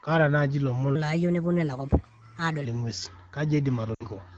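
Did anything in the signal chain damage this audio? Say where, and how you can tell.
Yes. A section at the wrong speed runs from 0.95 to 2.65 s. The speech there is hurried and raised by roughly four semitones, which matches playback at 1.23 times the original rate. Pitch and tempo jump together at the boundaries and then drop back. That coupling rules out a pitch effect or a faster speaker. The likely stage is editing or playback, where this stretch was clocked against the wrong rate.

Lost AMR speech frames cause a 60 ms gap from 3.94 to 4.03 s, near the end of the clip. The voice briefly smears and then fades instead of cutting off cleanly. That is the decoder's concealment at work: it repeats the last good pitch and vocal-tract settings with decaying gain, and in the wideband AMR codec this fade is quick. A dropout this long fits about three consecutive 20 ms frames corrupted on the radio link.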